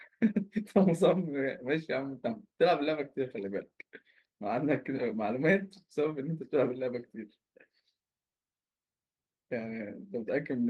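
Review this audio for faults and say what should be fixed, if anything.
No faults turned up in this audio, so nothing needs to be fixed.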